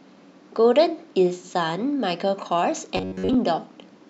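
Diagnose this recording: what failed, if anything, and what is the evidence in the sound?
From 2.97 to 3.35 s the speech turns into a rigid, metallic buzz at 93.8 Hz. This is robotic sound from repeated short buffers, likely a starved driver or buffer looping roughly 10.7 ms segments. Unlike dropouts, there are no silent gaps, only a fixed pitch over the speech.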